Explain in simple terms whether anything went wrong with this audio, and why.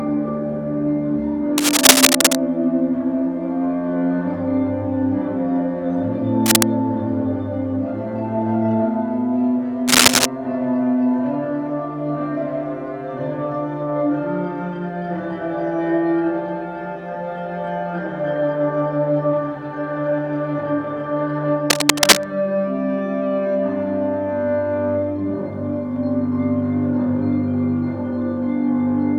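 A worn cable, plug or control was likely being moved, so the electrical contact kept flickering between good and bad. That fault is called cable scratch noise. You hear it as short bursts of harsh scratching or rustling, louder than the sound underneath, from 1.58 to 2.35 seconds, 6.46 to 6.63 seconds, 9.88 to 10.26 seconds and 21.70 to 22.30 seconds. Each burst stops once the connection settles.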